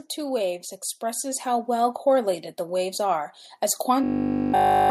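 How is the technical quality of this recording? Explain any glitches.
Two real glitches here, so it's not a clean take. From 0.15 to 3.35 s, automatic gain rising: the level control thinks things are quiet and eases up about 8 dB, lifting the speech and background together. Then from 4.04 to 4.9 s there's a robotic sound, likely from repeated short buffers. New audio arrives late, 20 ms chunks loop the whole time, and you get a rigid 50 Hz metallic buzz.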